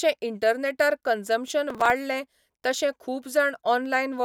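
From 1.48 s to 1.90 s the speech is overlaid with processor overload crackle, a gritty tearing that ends abruptly at the later mark. The processing could not finish its short audio buffers on time, which fits buffers of around 5 ms, and several deadlines were missed close together. Each miss replayed a fragment of stale audio with hard edges, and the string of these discontinuities produces the rough, crackling texture.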